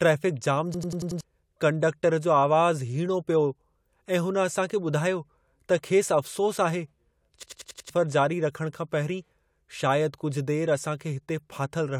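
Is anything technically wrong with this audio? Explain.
Yes. The speech breaks into a system hang loop twice, from 0.74 to 1.21 s and again from 7.43 to 7.90 s. Each time, one fragment of about 93 ms repeats five times. The machine stalled, but the sound hardware kept replaying the same stretch of its ring buffer. The loop length fits a 4096-sample buffer. The result is a machine-gun stutter at about 10.8 repeats per second. Roughly half a second of speech is lost each time.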